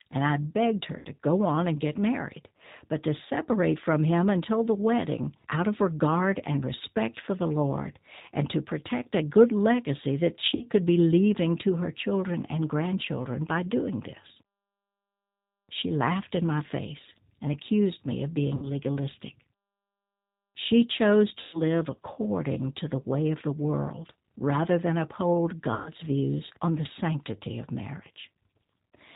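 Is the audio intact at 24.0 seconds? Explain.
No. From 24.02 to 24.05 s, between "the way of the" and "rather than uphold", there is VoIP packet loss concealed by the speech codec. About 20 ms of audio is missing, which points to a single lost packet. The decoder fills the gap by extending its last pitch and filter, so the sound smears into a brief buzzy tone or coloured noise that fades.

The G.729 codec is also plainly audible here at 8 kbit/s. It cuts everything above 4 kHz and synthesizes the speech from a filter and a handful of pulses, which makes the speech sound rough and synthetic.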